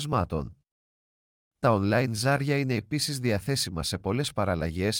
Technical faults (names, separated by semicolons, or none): none